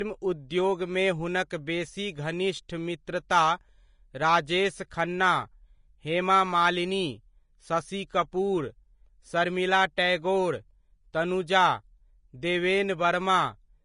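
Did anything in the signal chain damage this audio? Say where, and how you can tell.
Yes. At the codec stage, the whole clip is hissy and grainy, with roughened tones, softened attacks and nothing above 10.5 kHz. A spectrogram shows a flat ceiling there and speckled, noisy treble. The likely cause is Vorbis compression at a rate fitting about 31 kb/s.

Pre-echo, also from the codec, occurs at 11.13 s. A hiss about 10 ms long runs just ahead of a sharp attack, which sounds smeared. The waveform shows low-level noise before the onset, and the spectrogram shows a faint broadband smudge there, because quantisation noise filled the whole transform block.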